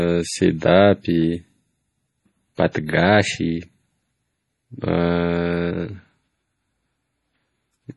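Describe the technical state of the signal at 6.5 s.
At 6.5 s the speech carries the same heavy damage that runs through the whole clip, likely from MP3 compression at a low bitrate, which fits something like 32 kbps. Nothing survives above 11.4 kHz, and with weak frequency lines dropping in and out between frames, it sounds watery and swirly, with smeared onsets and chirpy s sounds.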